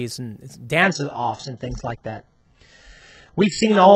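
From 0.82 s to the end, an adaptive stream at a lower bitrate takes over, switching without a gap to a much leaner encoding, consistent with a drop from roughly 96 kbit/s AAC to 8 kbit/s HE-AAC. The speech suddenly loses everything above 8 kHz, turning dull and artefact-laden.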